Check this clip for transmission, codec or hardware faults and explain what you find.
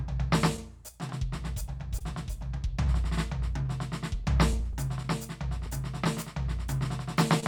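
There are a few transmission faults in this music clip, all tied to timing between the two ends of the link rather than to the codec or the hardware.

Clock drift between sender and receiver runs through the whole clip. The sender's clock is about 2% slower than the receiver's, so the jitter buffer keeps draining. The receiver has to keep stretching the audio to avoid running dry, which gives the music a slightly unsteady feel throughout.

Repeated timing corrections show up from 0.83 to 4.60 s. Because of the drift, the receiver keeps adding small slivers of repeated audio, playing at about 98% speed and adding roughly 70 ms over that stretch. Each edit goes the same direction but they're unevenly spaced.

There's a short stall from a late packet at 1.99 to 2.01 s. A packet wasn't there on time, the buffer ran empty, and the receiver held the last sound for 18 ms until it arrived. Nothing is lost, but there's a brief held moment with a slight buzz or dip.

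Scattered short gaps appear from 5.66 to 7.43 s, about five of them. Each was a late or lost packet patched by continuing the previous sound, roughly 70 ms concealed in total and around 4% of that span, with the longest near 30 ms. These come through as little ticks and smears in the music.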